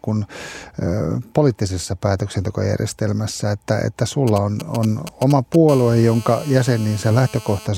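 From 4.28 s to 5.69 s, GSM signalling bursts break into the speech: a galloping dit-dit-dit of brief 217 Hz buzzes, roughly 15 dB below the voice. A nearby 2G phone is sending short groups of radio bursts, as it does while setting up a call or a text, and the audio circuit rectifies them. On a spectrogram, short stacks of harmonics on a 217 Hz spacing appear in clusters; the waveform shows spiky pulse trains separated by gaps.

At 5.69 s the pattern turns into a continuous GSM phone buzz that lasts until 7.66 s, about 20 dB below the speech. The phone is now transmitting steadily at 217 bursts per second, which fits an active call, and each rectified pulse adds a raspy, harmonic-rich 217 Hz drone that has nothing to do with the speech. A spectrogram shows unbroken horizontal lines at 217 Hz and its multiples, reaching well up the spectrum. The waveform carries a regular comb of sharp pulses under the speech.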